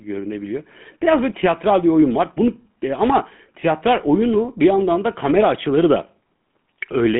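Throughout, the speech has passed through the GSM full-rate codec, which models the vocal tract and drives it with coarse, regularly spaced pulses, consistent with the 13 kbps rate. Nothing survives above 3.8 kHz, the line band sits around 150 Hz to 3.5 kHz, and a plainly audible buzzy, gravelly roughness coats the voice.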